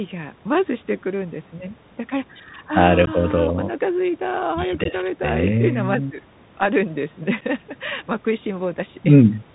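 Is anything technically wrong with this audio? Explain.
Yes. The speech carries two faults.

Throughout, the Bluetooth CVSD headset codec is plainly audible. Its one-bit delta modulation, which fits a 64 kbps stream, slews too slowly on loud highs, so sibilants turn scratchy over a granular hiss. Unlike ordinary low-pass filtering, nothing above 4 kHz survives and the hiss stays present.

Unconcealed Bluetooth headset packet loss occurs at 3.06–3.08 s and 4.84–4.87 s, each losing about 15 ms (a couple of packets), and at 7.41–7.43 s, losing 7.5 ms (about one packet). These are hard-edged gaps that return briefly quieter, not the smoothed, repeated sound of concealment.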